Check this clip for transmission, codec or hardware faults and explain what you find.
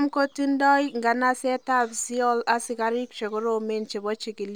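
There is one hardware fault, sample clock jitter, present across the whole speech clip. The converter's clock wanders by around a microsecond and a half, so each sample lands slightly early or late. Steep, fast-moving parts of the waveform are mismeasured most, leaving a rough hiss roughly 40 dB below the signal. On a spectrogram it appears as a faint broadband haze that brightens under loud, high-frequency speech and disappears in the pauses.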